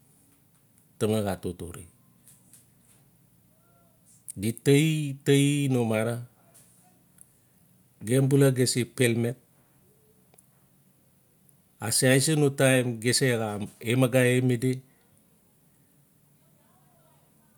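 No technical faults can be heard anywhere in this recording.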